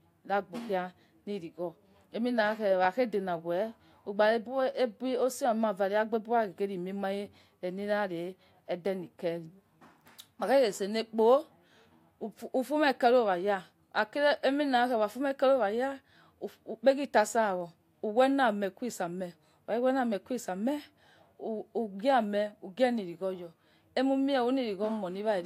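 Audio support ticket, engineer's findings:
Likely dropped samples: a couple of samples missing from the stream at 17.61 s, so the waveform jumps straight to a later value. Audible as a single sharp click just before "wame kue isame", a thin vertical line in the spectrogram; no sound content lost.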